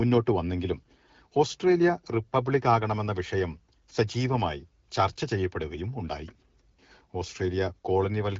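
Nothing stood out on listening to this speech recording; no technical problem could be heard anywhere in it.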